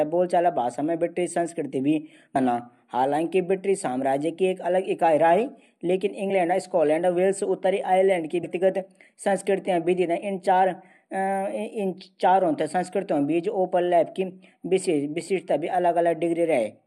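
Compressed frames were skipped in the speech at 2.35, 6.29, 8.43 and 10.22 s. Whole 21.3 ms frames are missing, so the audio jumps ahead by about 300, 20, 100 and 20 ms.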